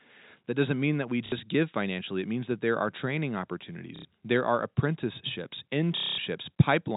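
A telephone-band speech recording, cut off above 4 kHz as G.711 coding does, with three dropouts handled by packet loss with last packet repeated: 60 ms at 1.26 s, 90 ms at 3.96 s, and 210 ms at 5.97 to 6.18 s. Each gap is filled by looping the last received chunk, which, in the long final run, turns into a robotic buzz near 33 Hz, which fits 30 ms packets.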